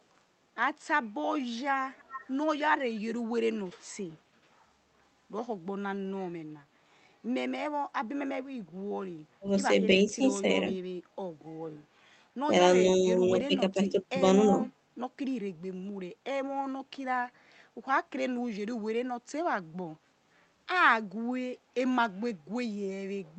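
Speech that came through a call, with the top end rolling off in a way that fits an Opus path band-limited to about 8 kHz. From 1.97 to 2.27 s there's an echo leak: a faint copy of the talker comes back roughly 15 dB down, trailing by about 343 ms, most likely a loudspeaker echo the far end's canceller didn't fully remove. Then there's speech suppressed in double talk, with the talker dipping at 9.41–9.47 s (around 10 dB), 9.93–10.69 s (a few dB) and 12.47–14.64 s (around 10 dB, over about a second in total), likely the canceller ducking everything while both sides talked.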